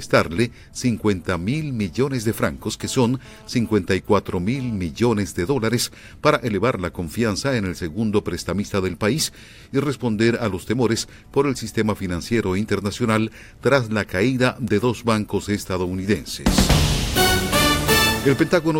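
From 2.80 to 4.76 s comes GSM phone buzz: a nearby 2G handset's radio bursts, 217 per second, are rectified in the audio circuitry into a raspy buzz about 26 dB below the sound. Unlike mains hum, it sits at 217 Hz with harsh harmonics and comes and goes with the phone's data transfer.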